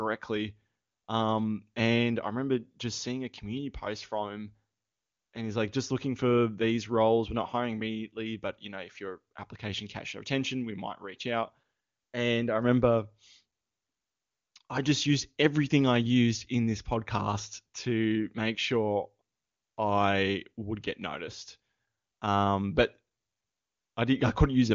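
No faults are audible in this speech; the top end stops near 7.2 kHz, as expected of the AMR wideband (HD Voice) codec, and the absence of any raspy low-rate texture fits its highest 23.85 kbit/s mode.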